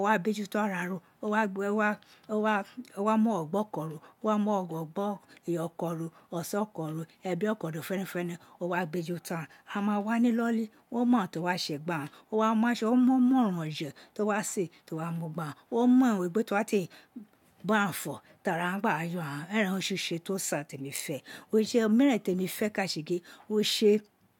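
No technical faults can be heard anywhere in the recording. The speech runs without any break, glitch or change in the signal.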